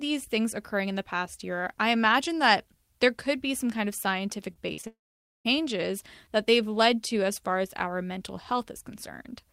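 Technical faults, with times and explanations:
4.53–4.57 s, 4.73–4.79 s and 4.81–4.85 s: short concealed packet loss. Right after "be some kind of", gaps of 20 to 40 ms are patched by extending the preceding sound. This leaves brief smears and wobbles.
4.87–5.47 s: long network dropout. The last sound trails off as a fading continuation, then about 0.49 s of silence follows. Likely about 0.58 s of audio never arrived.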